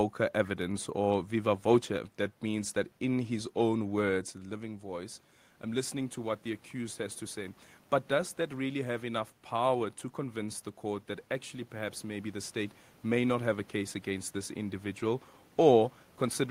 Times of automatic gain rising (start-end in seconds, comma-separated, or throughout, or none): 3.31-12.57